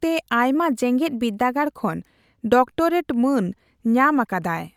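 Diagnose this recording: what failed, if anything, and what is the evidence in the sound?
From 0.54 s to 1.64 s the speech runs faster and higher, then returns to its normal speed and pitch. The rate rises by about 5.5% and the pitch by about 93 cents, close to a semitone. Because speed and pitch move together and the shift switches on as a step, this is likely a drift correction step at the driver or buffer stage, where clock-matching software briefly changed playback rate to rebalance its buffer.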